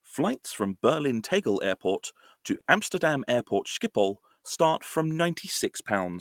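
At 2.60 to 2.68 s the speech shows a short stall from a late packet. The jitter buffer ran dry, so the receiver held the last sound for about 50 ms and then resumed without losing anything, leaving a briefly stretched moment with a faint buzz or dip and 50 ms of added delay.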